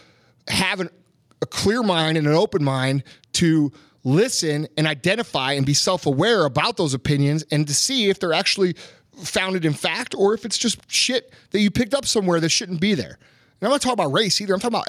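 No technical faults are audible.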